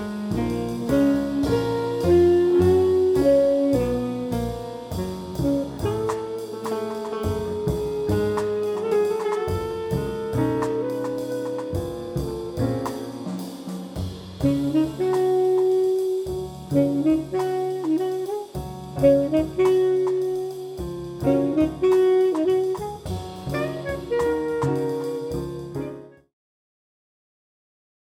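No technical faults; the only level change is a deliberate smooth fade-out from around 25 s to 26.35 s, with no click or hard edge.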